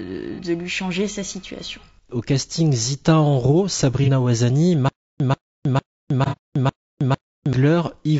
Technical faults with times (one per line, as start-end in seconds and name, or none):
0.00-8.19 low-delay AAC compression
0.35-0.40 AAC frame loss with concealment
4.04-4.09 AAC frame loss with concealment
4.89-7.53 stutter with silent gaps
6.25-6.37 AAC frame loss with concealment